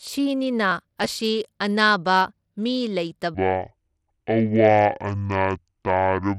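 Throughout the clip, the speech has likely been squeezed through Bluetooth SBC compression at a low bit allocation, which fits about 96 kbps. The weaker top bands get few or no bits, and coarse quantisation of the remaining bands leaves plainly audible grit and flickering treble.

From 0.72 to 1.08 s, processor overload crackle appears: the processor misses a run of short buffer deadlines, around 5 ms each and probably a dozen or more in a row. Each missed buffer is skipped, leaving hard-edged gaps that merge into a burst of tearing crackle.

From 3.34 s to the end, a section plays at the wrong speed, 0.545 times normal. The playback clock is likely mismatched, so pitch and tempo fall together by roughly ten semitones, and the speech turns deep, slow and dragged.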